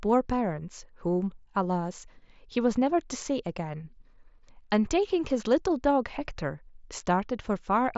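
Nothing stood out on listening to this speech, which comes over a Bluetooth mSBC headset link that carries nothing above 7.7 kHz.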